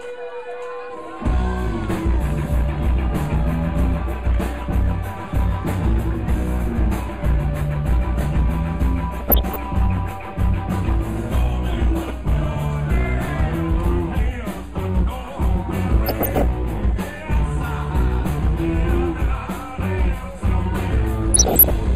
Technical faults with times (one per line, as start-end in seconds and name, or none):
9.20-9.56 DAB burbling
11.98-12.10 DAB burbling
15.94-16.44 DAB burbling
21.34-21.70 DAB burbling